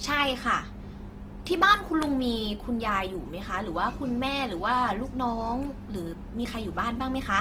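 Speech recording with plainly audible Opus compression damage from start to finish. The voice sounds rough, grainy and noisy rather than swirly. The likely cause is Opus running in its music (CELT) mode at a low rate, which fits about 16 kbps. With too few bits, that mode keeps each band's energy but fills starved bands with copied lower content or noise. The bandwidth stays full, with content reaching about 20.2 kHz, so nothing sounds muffled.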